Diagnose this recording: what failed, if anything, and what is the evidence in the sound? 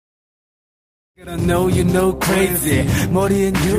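Nothing failed; the only change in the sound is a smooth fade-in from around one second that reaches full level at 1.62 s.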